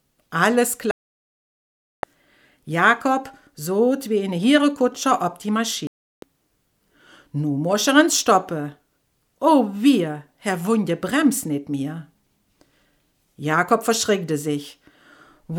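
At 0.91 s the sound mutes abruptly for about 1.1 s, returning at 2.04 s. A second hole runs from 5.87 to 6.23 s. Both are digital broadcast dropouts. The receiver lost valid frames and muted, so that programme material is gone.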